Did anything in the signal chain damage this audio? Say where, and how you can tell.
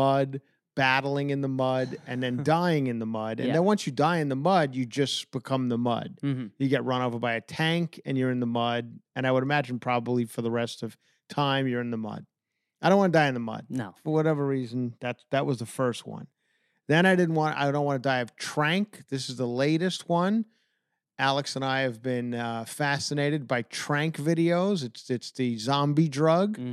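No, nothing in the chain audibly damaged this speech, at any stage from capture through to playback.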